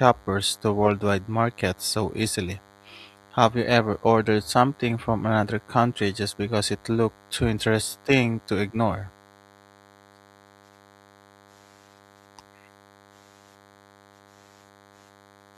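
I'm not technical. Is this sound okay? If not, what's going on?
No, there's a problem. Underneath the speech, for the whole clip, there's a thin, steady buzz. That's DECT cordless phone buzz. A cordless phone or its base station nearby sends out a tiny radio pulse a hundred times a second, and the recording gear accidentally turns those pulses into sound. It sits well below the speech, but it's constant.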